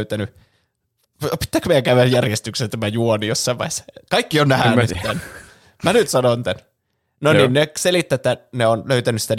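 A loud glitch cuts through the speech from 2.11 to 2.15 s, and a longer, quieter glitch follows from 4.93 to 5.10 s. Both are corrupt frames decoded: damaged data in a couple of frames, then several, was played back as misplaced spectral energy.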